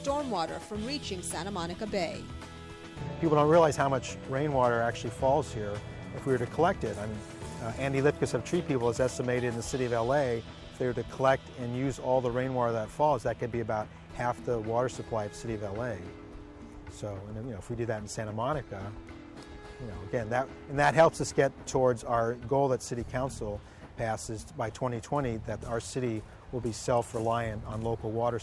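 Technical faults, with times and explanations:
No technical faults can be heard anywhere in this audio. There is nothing to mark with a time or to explain.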